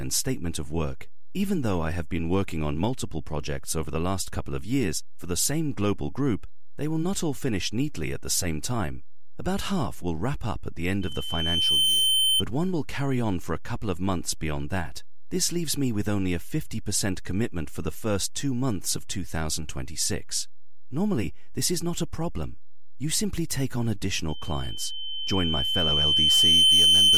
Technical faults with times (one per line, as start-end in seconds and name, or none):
0.00-27.18 DC offset
11.01-12.43 loudspeaker feedback squeal
24.28-27.18 loudspeaker feedback squeal